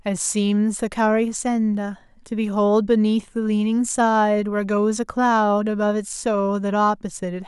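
Nothing in the recording stood out as a technical fault on listening.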